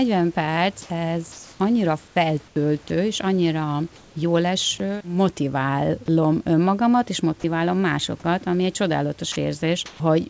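At 0.82, 1.32, 2.08, 2.48 and 3.96 s the room background, sitting about 30 dB below the loudest speech, is replaced for 80, 280, 80, 80 and 200 ms by comfort noise in place of the background. This is likely discontinuous transmission: the sender stopped sending during pauses and the receiver synthesised a smooth, featureless hiss shaped roughly like the room. The level shifts at most swaps, about 5 dB louder at 0.82 s, unchanged at 1.32 s, and about 4 dB and 7 dB quieter at 2.08 and 2.48 s.

At 2.88 s the sound is dropped by the voice detector. For 20 ms, sound was likely judged to be background and not sent, and the same steady noise briefly stands in for it. The same happens at 9.32 s, where 40 ms of sound gives way to comfort noise before the speech resumes.

From 9.86 to 10.0 s comfort noise again replaces the background, here about 22 dB below the loudest speech, at about 1 dB lower level. 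The smaller dip at 3.96 s was also about 1 dB lower. Across the clip nothing is heard above 8 kHz, which fits a wideband call codec.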